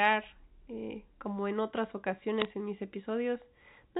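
Between 2.4 and 2.45 s, right after "eh como en otras" and before "en mis", the digital phone line corrupted a short run of data, producing bit errors on a digital phone line at a rate of roughly half a percent, which points to a handful of frames being hit. On this G.711 mu-law link each flipped bit alters a single sample, and where a high-order bit or the sign of a loud sample is struck the sample jumps sharply. The result is a brief cluster of clicks and crackle laid over the speech, whose underlying band-limited telephone sound carries on beneath the ticks.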